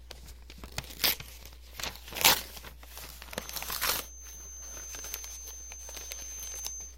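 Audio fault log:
3.31–6.98 s, feedback whistle: a thin, steady tone at 6.3 kHz enters and continues to the end, sitting roughly 10 dB under the main sound and swelling and fading slowly in level. This is likely a loudspeaker-to-microphone loop held just at its feedback point, so one frequency keeps ringing without growing. On a spectrogram it shows as a single unbroken horizontal line at 6.3 kHz.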